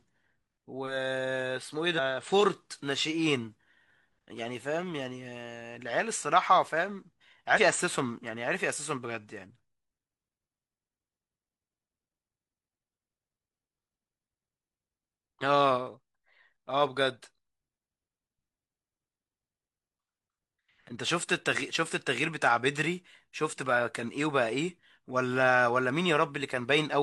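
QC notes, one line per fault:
1.94–2.00 s and 7.53–7.59 s, compressed frames skipped: the speech jumps forward, losing roughly a third of a second and then about a tenth. Missing or rejected frames were never decoded, and the skips fit whole frames of about 43 ms.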